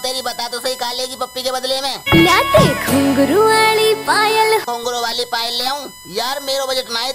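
There's a steady USB whine running under the sound for the whole clip, a fixed-pitch tone built on 1 kHz with its strongest component up at the 5 kHz harmonic, sitting only around 20 dB below the wanted signal. That spacing points to the bus's 1 ms frame timing, where current draw pulses every millisecond and the ripple sneaks into the audio through shared power or ground.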